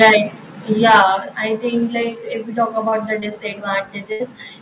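Microphone overload opens the speech at 0.00 to 0.17 s and returns at 0.84 to 1.03 s, just before "I think". The peaks are flattened, with a hard, crackly edge on the loudest syllables. The input was likely driven about 8 dB past the converter's ceiling, so the tops of a sizeable share of the waveform are sheared off, more in the first burst than the second. The rasp sits on top of a narrowband sound with nothing above 4 kHz, which fits a G.711 call path.

Microphone volume stepped down comes during each overload. At 0.03 s the level falls by about 2 dB in a single step, and at 1.02 s, right before "I think", it drops by about 6 dB. Voice and background fall together, abruptly rather than with a smooth fade. The most likely cause is the call software reacting to the clipped peaks by cutting the device's input volume in one move.

Short concealed packet loss comes at 2.90 s, just after "we talk", and again at 3.20 s. 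Each time about 20 ms of audio failed to reach the decoder. The receiver covered the gap by extending the sound it last had, then blended back into the real signal. The result is a brief smear or wobble, and a quick consonant could be thinned out.

A burst of packet loss runs from 4.12 to 4.22 s, with about 80 ms missing. The concealment stretches the last sound and fades it as the gap goes on, so it becomes a held, dulling buzz or a sinking hiss. The audio then resumes further along, and the stretch in between is simply gone.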